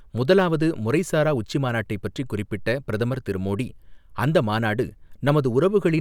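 Speech recording with no audible technical faults anywhere.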